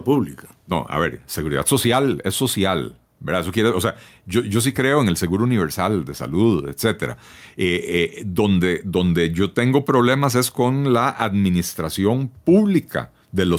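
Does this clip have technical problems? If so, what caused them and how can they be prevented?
Yes, there's gain pumping all the way through this speech clip: the level ducks by around 5 dB under each loud syllable, leaving everything squashed. The likely cause is input gain set far too hot, with a fast limiter or compressor clamping down on every peak. To prevent it, lower the mic preamp gain and ease off or slow down the limiting.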